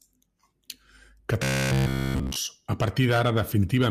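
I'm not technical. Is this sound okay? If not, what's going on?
No. From 1.43 to 2.36 s the speech turns into a rigid, metallic buzz at about 67 Hz: robotic sound from repeated short buffers. The software likely kept looping the last 15 ms of audio throughout that stretch while new sound arrived too late.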